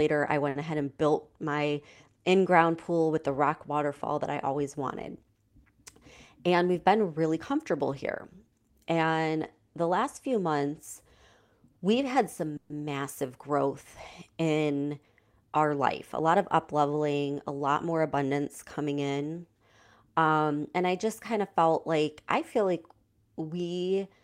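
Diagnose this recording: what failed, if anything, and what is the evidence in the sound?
Short stall from a late packet, 0.49 to 0.57 s. The fault sits at the network and jitter buffer stage. A packet arrived late, the buffer ran dry, and the receiver stretched the last sound by about 60 ms to bridge the wait. It then resumed exactly where it stopped, so nothing is lost. The sound is held unnaturally long with a faint buzz or dip, and the playout delay grows by 60 ms from that point.

Jitter buffer speed-up, at 6.38 to 7.25 s, 15.33 to 15.79 s and 17.51 to 18.25 s. This is the receiver's buffer management working off excess delay. It clips out short pitch-period slices repeatedly, so the speech runs at 107%, 110% and 109% of normal rate while the pitch stays the same. Roughly 70, 50 and 70 ms are trimmed in those stretches, and each passage sounds briefly hurried.

Call audio freeze, 12.57 to 12.72 s. 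The last sound is continued as a fading buzz or hiss for about 130 ms, with no drop to silence, and the speech then picks up exactly where it left off, so nothing is missing. The likely cause is packets held up in the network, leaving the jitter buffer empty until they arrived. The inserted gap adds 130 ms of delay.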